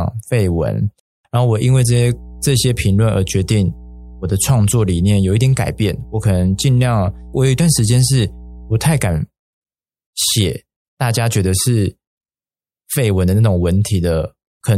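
Speech, carrying mains hum from 1.65 to 9.20 s: a steady 60 Hz tone about 20 dB below the speech, coupled in from a ground loop or nearby transformer. Unlike broadband rumble, it holds one fixed pitch throughout.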